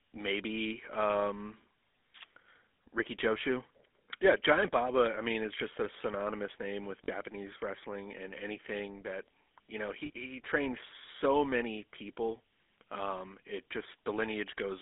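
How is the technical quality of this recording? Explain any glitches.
The recording has audible telephone-codec damage throughout and two brief dropouts.

GSM full-rate codec (throughout): pulse-excited vocal-tract modelling, consistent with 13 kbps, band-limits speech to 300 Hz–3.5 kHz and adds a buzzy, gravelly roughness rather than the watery swirl of modern codecs.

Lost GSM frames at 7.04–7.09 s (after "a synonymous name with", before "wrestling and anything that") and 10.06–10.11 s (after "anything that you know", before "he trained so many"): about 40 ms each, the last good frame was repeated. This gives a short metallic ring instead of a silent gap or click.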